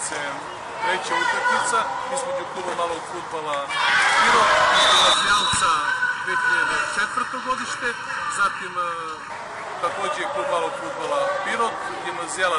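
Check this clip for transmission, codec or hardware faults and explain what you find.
One fault stands out: channel delay (comb filtering), from 5.14 to 9.30 s. Through this stretch the sound turns hollow and phasey, with a dull, boxy colour that stays fixed. One channel is running late by under a millisecond, and when the two are summed to mono, the shared content cancels at evenly spaced frequencies. The first notch falls around 700 Hz, with further notches repeating at regular intervals above it.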